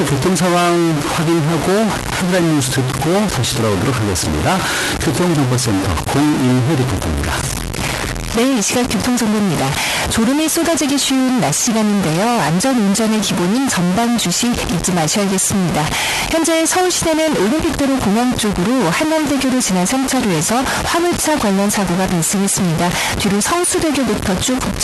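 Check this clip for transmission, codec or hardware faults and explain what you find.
There's one real fault, and it runs the whole way through: a stuck bit. Across all of the speech there's a distorted grit, and the pauses never go clean. They fill with a hiss of their own. That pattern likely comes from a data line or converter bit stuck high or low, which knocks roughly half the samples off by a fixed amount. The error follows the waveform, and the noise in quiet gaps comes from small values flipping sign. The top end stops at about 12 kHz, which is just the Opus call path doing its normal band-limiting.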